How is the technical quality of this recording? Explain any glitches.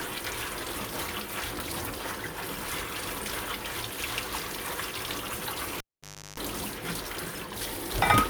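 One glitch stands out. From 5.78 to 6.40 s, a cable is pulled and plugged in: a pop, about 0.57 s of near silence with 0.35 s of 50 Hz mains buzz as the tip touches, then another pop.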